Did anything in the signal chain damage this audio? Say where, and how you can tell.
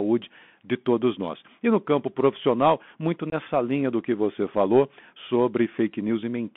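Yes, two problems, both from the Bluetooth headset link. The whole clip carries the Bluetooth CVSD headset codec. The speech sits in a narrow band from about 150 Hz to 3.5 kHz, which fits a 64 kbps CVSD link. The damage is plainly audible: a grainy hiss under the voice and scratchy s sounds. CVSD sends one up-or-down bit per sample with an adapting step, so fast, loud, bright detail outruns the step and smears.

There's also unconcealed Bluetooth headset packet loss on the radio link between headset and phone, from 3.30 to 3.34 s. About 22.5 ms of audio just drops out, which points to a few lost packets. Nothing patched over the gap, so the hole has hard edges that can tick. With CVSD the decoder's step size has to rebuild after the gap, so the speech comes back a touch quieter for a moment.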